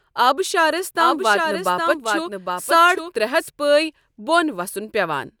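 From 0.97 s to 3.49 s the speech carries a doubled audio track: a second, full-band copy trails the original by roughly 0.7 s, around 5 dB quieter, with no reverb tail or room colour, switching on and off abruptly. The likely cause is a slower second capture path or two misaligned copies in an edit. On a spectrogram, each harmonic pattern reappears as a fainter duplicate shifted right; the waveform shows overlapping envelopes with hard edges at both ends.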